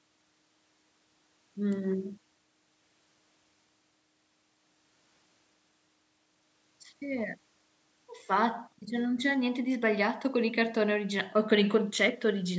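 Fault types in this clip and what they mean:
No technical faults are present: the speech has passed through call microphone processing, which removes the lowest bass and leaves nothing above 8 kHz, both normal for that path.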